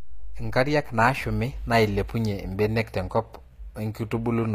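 From start to finish the speech has that plainly audible HE-AAC compression sound, likely from a low-rate encode, which fits something around 24 kbps. The top band isn't the real signal: the treble has been rebuilt by copying lower bands upward and shaping them coarsely, so the harmonics don't line up above the crossover. The s sounds come out gritty and metallic, and there's nothing at all above about 14.8 kHz.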